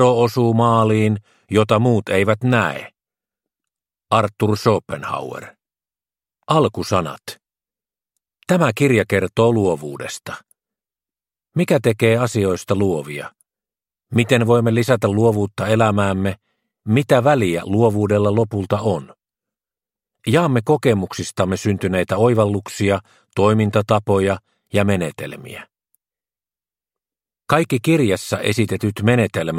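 At 4.92 s there is a sharp tick, a tiny dropout in the sound so brief it registers as a click rather than a gap. This is a block of digital silence lasting 5 ms: a short run of samples was replaced by zeros, most likely because the output buffer was not filled in time. The signal drops straight to zero and returns without any fade, and those abrupt edges produce the click.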